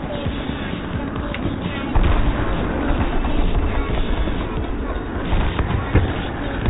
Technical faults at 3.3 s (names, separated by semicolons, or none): none